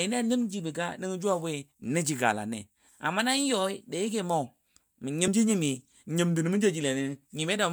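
Compressed frames were skipped in this speech recording at about 5.27 s: a couple of frames were not played, so around 40 ms vanishes and the audio jumps ahead.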